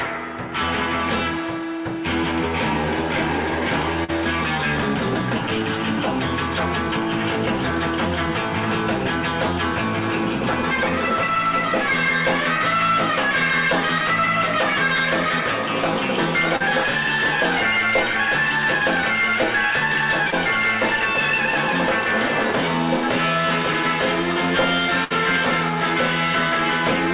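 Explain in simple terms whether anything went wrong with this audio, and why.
A few things did go wrong, all of them packets of the call going missing on the way.

First, there's short concealed packet loss at 4.04, 16.56 and 20.30 s. Each time, a tiny slice of the audio, about 40 ms in the first two and 20 ms in the third, never arrived in time. The receiver patched the hole by carrying the last bit of sound forward, either from its pitch or as shaped noise, then eased back into the real audio. You hear it as a quick smear or wobble.

Then there's a burst of packet loss from 25.04 to 25.12 s. This gap is longer, about 60 ms missing, so the receiver had to keep stretching the last sound while turning it down. Depending on what was playing, that comes out as a held buzz or a fading hiss before the audio picks up again a little further on, with that stretch simply gone. Throughout, the sound goes through a phone-style call codec, so there's nothing above 4 kHz.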